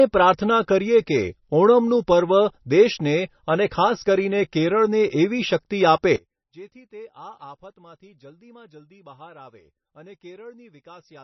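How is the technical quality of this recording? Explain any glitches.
Quality is poor: the speech is heavily compressed throughout, and in the second half it drops almost out of hearing.

MP3 compression runs through the whole clip. Nothing remains above 5.9 kHz, and the damage is heavy, which fits a bitrate around 25 kbps. At that rate the encoder likely discards the top band and zeroes weak frequency lines that flicker between frames, so the speech sounds dull, watery and swirly, with metallic chirping on sibilants and smeared consonant onsets.

One channel inverted is the likely cause of the second problem, from 6.16 s to the end. The level falls by about 26 dB. When the two channels, one with reversed polarity, are summed to mono, the content they share cancels. The centred speech collapses to a faint residue made up only of the small differences between the channels.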